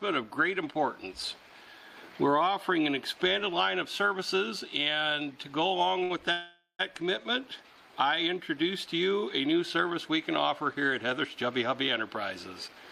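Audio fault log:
6.03–6.12 s, short stall from a late packet: the sound hangs for about 66 ms, a held sustain with a faint buzzy edge where fresh audio should have continued. The packet due at this point had not arrived, so the jitter buffer ran dry and the receiver stretched the last stretch of sound until it came in. Playback then resumes from exactly where it paused, so nothing is lost, but the whole stream now sits about 66 ms later.
6.32–6.81 s, call audio freeze: the sound locks into a lingering continuation that decays as a fading buzz and then drops to silence for about 110 ms, adding a gap of about 471 ms in total. The likely cause is packets held up in transit, emptying the jitter buffer while the receiver padded the wait with concealment. When they arrive, the audio picks up from the point where it stopped, so nothing is missing, and the delay grows by about 471 ms.
12.69–12.81 s, jitter buffer speed-up: this short stretch plays at about 144% speed with the pitch unchanged, giving a hurried feel just before the end. 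The buffer was holding more audio than its target, so the receiver trimmed it by cutting out tiny pitch-period-sized slices in quick succession. About 50 ms is removed, bringing the delay back down at the cost of a brief rushed moment.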